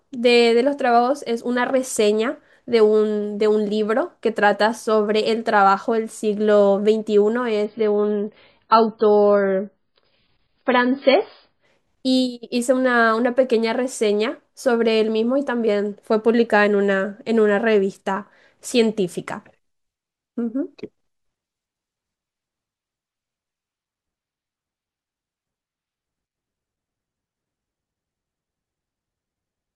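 From 7.65 s to 11.65 s the speech drops abruptly to an adaptive stream at a lower bitrate, then returns just as suddenly, with no gap at either edge. The player switched from a version that sounds like 128 kbit/s MP3 to one consistent with 16 kbit/s MP3, likely because the connection slowed. For those four seconds nothing above about 5.1 kHz remains, so the speech turns dull and muffled, with coding artefacts raised.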